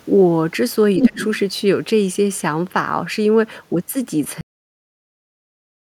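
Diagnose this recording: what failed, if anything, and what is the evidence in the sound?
From 0.98 to 1.39 s a second voice rides on top of the talker, a few decibels louder than the talker's own speech. This is the other side's voice leaking through. The stage is call processing: the far end was played on a loudspeaker, picked up by the microphone, and likely left in place by an echo canceller that failed to subtract it, so the remote speech is sent back with the local signal.

Inside that same window, from 1.08 to 1.19 s, the talker's speech sinks by roughly 25 dB at its deepest, for about 100 ms in total. This is speech suppressed in double talk, again at the call-processing stage. With both sides active at once, the suppressor likely could not tell the near-end voice from the loudspeaker echo and attenuated the whole microphone signal, taking the wanted speech down along with the echo.

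At 4.41 s the audio stops mid-sound and falls straight to digital silence, with no decay, and stays silent for the remaining second and a half or so. This is a cut-off end, pointing to the driver or buffer stage, or to storage at the moment the file was closed. The final buffers were never written or flushed, so the signal ends on whatever sample was last committed rather than fading naturally.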